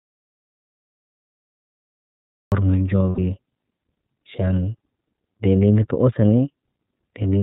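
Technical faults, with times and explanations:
Throughout: iLBC codec. The band stops sharply at 4 kHz, so a spectrogram shows nothing above that line, and the voice sounds plainly rough and synthetic. The framing fits iLBC's 30 ms mode at 13.33 kbps, with each frame's excitation coded independently.
0.00–2.52 s: audio dropout to silence. The clip opens mid-gap and the speech only arrives at 2.52 s. The waveform is a dead flat line and the spectrogram is blank, with no room tone, which is most likely a lost input or mute while silence kept being written.
3.09–3.19 s: lost iLBC frames. For about 90 ms, which fits three lost 30 ms frames, the decoder repeats the last pitch cycle mixed with noise. This produces a held, faintly buzzy vowel, shown as steady repeated harmonics on a spectrogram, before the voice recovers at once.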